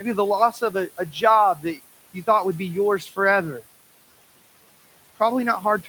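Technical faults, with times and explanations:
Throughout: noise suppressor artifacts. The room noise sits about 17 dB below the speech, and the suppressor pulls it down by about 18 dB in the pauses. The background then sinks whenever speech stops and swells back up underneath it.
0.52–1.23 s, 1.55–1.8 s, 2.99–3.18 s: speech cut by the noise suppressor. In these stretches the suppressor mistook quiet parts of the speech for background and turned them down with it. The drops reach about 12, 11 and 12 dB, touching roughly a third, a sixth and a tenth of a second of sound. Unlike the steady artifacts, the speech itself dips here, so softer sounds come out swallowed or faint.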